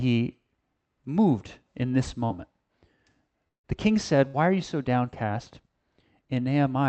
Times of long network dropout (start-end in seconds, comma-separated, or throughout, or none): 3.48-3.66